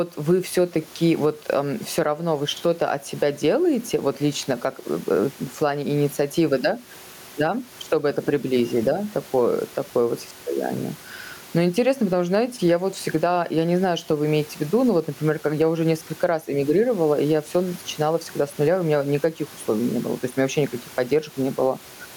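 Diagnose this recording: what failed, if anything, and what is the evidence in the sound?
Gain pumping: input gain is likely set far too high at the capture stage, so a fast limiter clamps it on every loud syllable. Throughout, the gain drops around 10 dB under loud passages, squashing the dynamics, with room noise about 33 dB below the speech.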